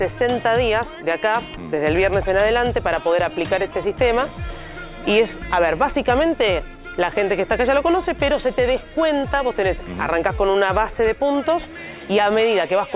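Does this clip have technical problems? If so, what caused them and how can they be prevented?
No technical problems are audible.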